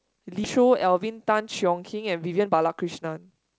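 A skip ahead at 0.44–0.46 s jumps playback forward with no gap filled. Roughly 0.7 s of audio was dropped while later audio already waited, likely discarded by the jitter buffer as it overflowed, so the two sides join almost directly.

Jitter buffer speed-up follows twice, at 0.58–1.72 s and 2.32–3.58 s. The buffer was holding extra audio, so the receiver repeatedly cut out pitch-period-sized pieces, about 70 ms and about 0.2 s in total. The sound runs 6% then 13% fast at unchanged pitch and feels hurried, while the G.722 call path leaves nothing above 8 kHz.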